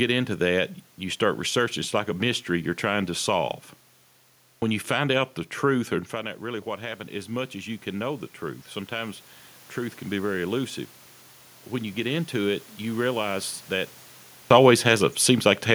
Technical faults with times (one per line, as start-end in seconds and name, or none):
4.39-4.62 clipped start after a pause
6.10-9.23 automatic gain rising
11.41-11.63 clipped start after a pause
14.28-14.50 clipped start after a pause